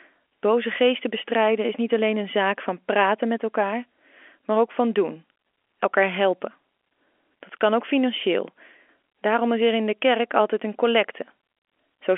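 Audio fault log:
No fault is present: the speech comes through an ordinary G.711 telephone channel, its sound held to roughly the 300 Hz to 3.4 kHz line band, as a 64 kbps mu-law path would give.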